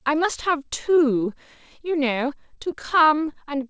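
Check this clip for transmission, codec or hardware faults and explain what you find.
One transmission fault is present: repeated stalls (stutter) in the last part of the speech, from 2.40 to 3.64 s. Packets arrived late or too slowly, so the receiver's jitter buffer kept running dry. Each time, it stretched the preceding sound to bridge the wait. There are 13 brief stalls, the longest about 13 ms, adding roughly 126 ms of filled sound, about a tenth of that stretch. Nothing is lost, but the speech drags with a fine, uneven stutter. On a waveform, short repeated or smeared cycles appear at each stall. On a spectrogram, harmonics flatten into brief horizontal smears where the pitch should be moving. The G.722 call path at 64 kbps shows as a spectrum with nothing above 8 kHz.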